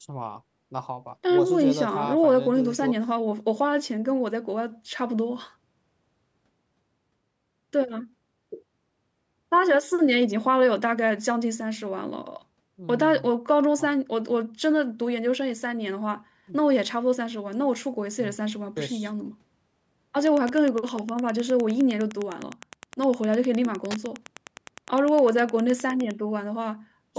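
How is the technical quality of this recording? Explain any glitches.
The recording has one clear glitch, Wi-Fi interference, in a speech clip whose call microphone processing leaves nothing above 8 kHz.

From 20.21 to 26.14 s, Wi-Fi interference appears: a nearby Wi-Fi radio's bursts get rectified by the audio circuitry. Beacons every 102.4 ms give steady ticking about ten times a second, roughly 25 dB below the speech. That ticking rhythm, not a continuous buzz, distinguishes it from mobile-phone interference.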